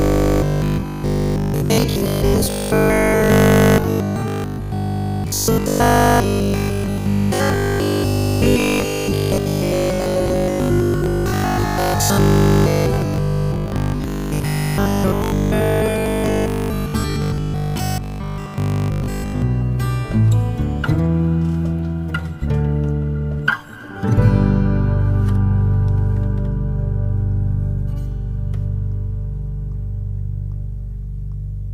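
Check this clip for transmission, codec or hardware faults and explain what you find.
One fault is present: robotic sound from repeated short buffers, from 0.02 to 19.42 s. A fixed 50 Hz buzz is imposed on the sound, likely from a 20 ms chunk being repeated when data arrived late. The spectrogram shows evenly spaced harmonic lines; the waveform shows roughly repeating cycles.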